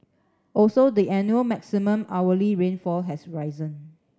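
No technical faults occur at any point in the clip, so there is nothing to describe in time order.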